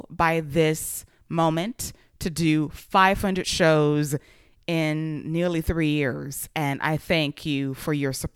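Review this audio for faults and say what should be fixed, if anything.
Nothing to fix: no faults turn up anywhere in the speech recording.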